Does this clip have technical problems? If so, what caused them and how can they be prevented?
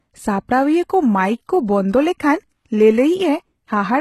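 Yes, throughout the speech the treble sounds bright but synthetic: sibilants come out gritty and lispy, with nothing above 12.3 kHz. This likely comes from HE-AAC compression at a rate near 16 kbps, with band replication copying lower bands upward. A plain low-pass would sound dull instead. Encode at a higher bitrate, or use plain AAC without band replication.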